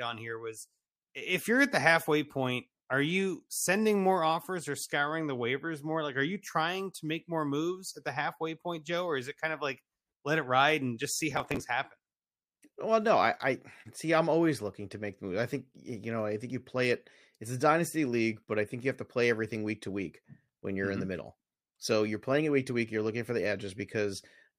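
At 11.31 s, just after "ride and just see", processor overload crackle runs until 11.6 s. Repeated missed deadlines on buffers of around 5 ms leave a string of small skipped gaps with hard edges, heard as a gritty crackling burst over the speech.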